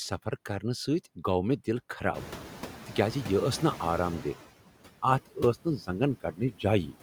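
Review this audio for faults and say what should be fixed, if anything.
Noise suppressor artifacts run through the whole recording. The suppressor attenuates the background by about 13 dB, band by band and frame by frame, so the residual noise drops away in the gaps and comes back up under the speech. To prevent this, reduce the suppression depth and smooth the per-band gains over time so the residue stays steady.

Noise suppressor catching up is heard from 2.14 s to 4.36 s, right after "گوٚو مےٚ دل". Near 2 s the room noise jumps by about 20 dB, settling about 14 dB below the speech. The suppressor's noise estimate trails that jump, so the louder background first passes with only about 9 dB of reduction and then sinks as the estimate adapts over 2.22 s. To prevent this, let the noise estimator track sudden level increases faster.

Speech cut by the noise suppressor occurs at 5.26 to 5.38 s and again at 6.2 to 6.65 s. 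The suppressor treats parts of the speech as noise and pulls them down with the background, by up to about 16 dB in the first event and about 17 dB in the second. That affects roughly a tenth of a second and then roughly a fifth of a second, and those stretches sound swallowed and faint. To prevent this, protect low-level speech energy with better voice-activity weighting and a floor on per-band attenuation.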